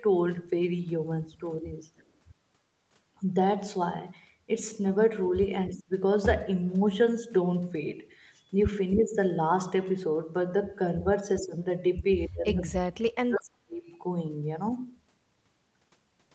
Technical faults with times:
1.98-2.03 echo leak
5.69-5.91 speech suppressed in double talk
9.02-9.16 speech suppressed in double talk
11.41-11.54 speech suppressed in double talk
12.33-13.83 speech suppressed in double talk

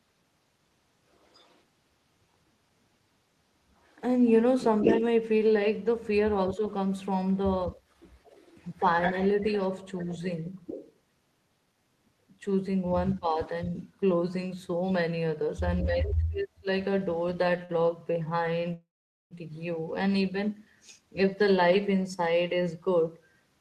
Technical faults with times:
1.12-4.97 echo leak
4.85-10.08 speech suppressed in double talk
8.01-14.91 echo leak
13.14-16.68 speech suppressed in double talk
17.65-17.72 short stall from a late packet
18.74-19.34 call audio freeze
20.75-21.89 jitter buffer speed-up

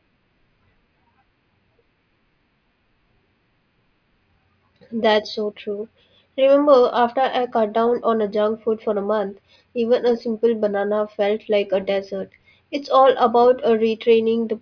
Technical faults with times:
none

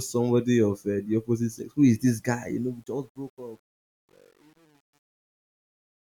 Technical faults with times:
2.42-6.05 truncation distortion on a fade

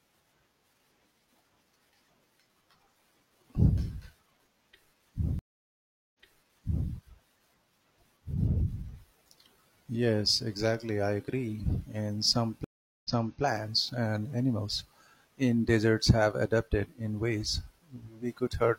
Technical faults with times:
5.39-6.88 stream reconnect
12.64-13.42 stream reconnect

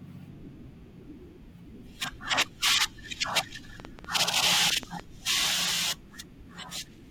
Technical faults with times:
3.80-5.01 train of clicks

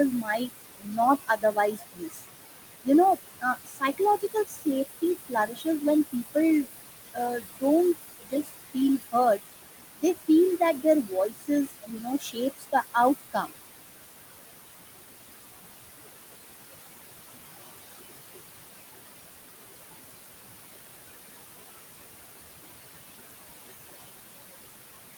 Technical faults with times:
0.00-25.17 noise suppressor artifacts
0.11-2.25 speech cut by the noise suppressor
2.83-5.82 speech cut by the noise suppressor
6.13-6.70 speech cut by the noise suppressor
7.12-7.63 speech cut by the noise suppressor
8.09-9.41 speech cut by the noise suppressor
9.96-13.54 speech cut by the noise suppressor

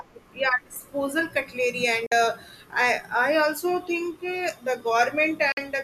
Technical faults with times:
2.06-2.12 digital broadcast dropout
5.52-5.58 digital broadcast dropout

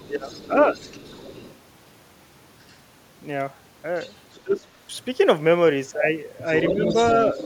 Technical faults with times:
0.00-1.59 other side's voice leaking through
0.10-0.30 speech suppressed in double talk
2.69-2.75 other side's voice leaking through
3.96-4.40 other side's voice leaking through
4.43-4.67 speech suppressed in double talk
6.45-7.46 other side's voice leaking through
6.72-6.96 speech suppressed in double talk

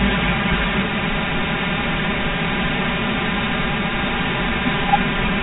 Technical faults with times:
0.00-5.42 channel delay (comb filtering)

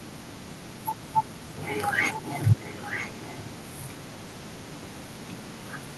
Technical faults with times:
2.59-3.58 echo leak

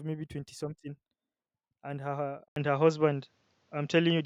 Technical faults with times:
2.48-4.25 input switched to a poorer device

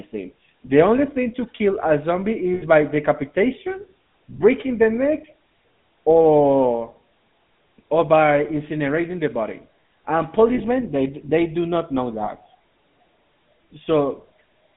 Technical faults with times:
0.00-14.77 GSM full-rate codec
2.54-2.63 lost GSM frames
10.54-10.61 lost GSM frames
12.24-12.29 lost GSM frames

